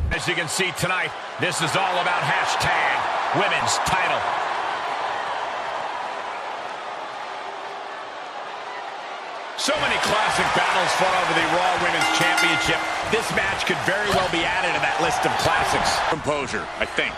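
At 3.6 s a brief, harsh blip cuts through the sound, a squawk-like burst lasting only a fraction of a blink before the audio carries on. This is damaged data in a compressed stream: some of the data in that stretch of the file was wrong, so the decoder misread the affected frame, lost its place in the bitstream and had to hunt for the next valid frame header, producing that momentary garbled chirp.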